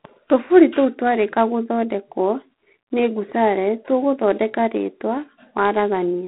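From the first moment to the end, the speech sits inside a narrow telephone band, roughly 200 Hz to 3.6 kHz, with nothing at all above 3.9 kHz, and it's plainly chewed up by G.726 ADPCM coding. The codec sends only a few bits per sample describing how each one differs from its prediction, so the error rides along as a harsh, rasping hiss that rises and falls with the speech. That roughness fits the 24 kbit/s mode.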